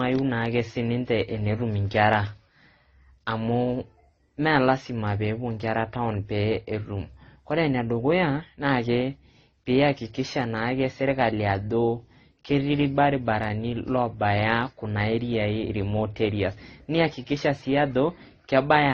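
From start to finish, the speech has no content above about 9.1 kHz. Smeared, swirly artefacts of different kinds are layered together. The likely cause is transcoding between lossy codecs, pointing to low-bitrate MP3, then AAC, then Opus near 24 kbit/s.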